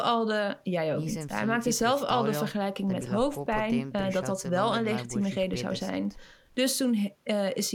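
No technical fault can be heard anywhere in this speech recording. There is nothing in the audio that calls for a timestamp or further comment.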